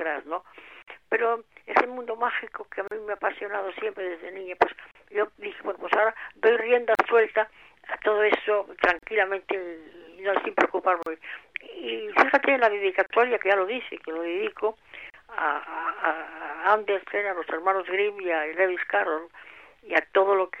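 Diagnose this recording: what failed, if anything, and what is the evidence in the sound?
Gaps at joins of encoded pieces open at 0.82, 2.88, 4.91, 6.95, 8.99, 11.03, 13.06 and 15.10 s, one every 2.0 s. The first is a 51 ms gap and the rest 38 ms each, with smeared edges before the sound resumes where it stopped. This is a codec-stage fault: 2-second segments were encoded separately and butted together untrimmed, so each join keeps the encoder's start-up delay and last-frame padding as silence.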